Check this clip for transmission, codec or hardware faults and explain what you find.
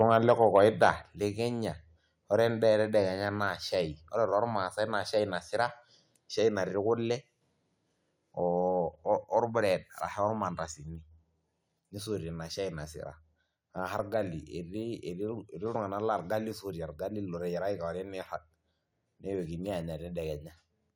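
Two faults show up in the speech, both at the microphone input. From 0.0 to 0.9 s there is microphone overload: peaks about 4 dB over full scale are flattened, clipping around one percent of samples, likely from an input volume set too high. The result is a harsh crackle on the loudest syllables. The microphone volume is then stepped down twice, likely by the call software's automatic gain reduction. At 1.02 s the level drops about 5 dB, and at 3.06 s, between "ore endaa" and "naa shaai ore tormaasai", it drops about 2 dB. Voice and background fall together abruptly each time.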